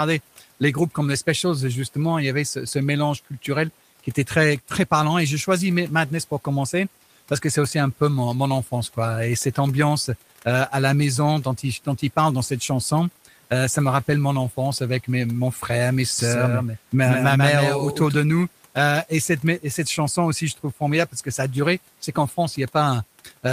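Speech clip with a doubled audio track from 16.19 to 18.15 s: a dry copy trails around 150 ms behind, a few dB quieter, switching on and off abruptly, likely a second capture path or misaligned edit. The room noise sits well below the voice.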